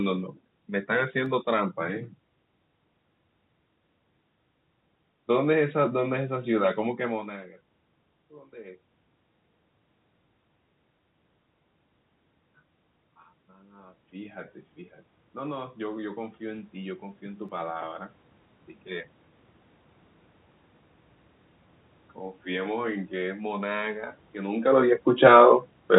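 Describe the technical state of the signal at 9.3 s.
At 9.3 s the signal is intact, with the speech passing cleanly through the call path and no dropout, glitch or other fault at that point.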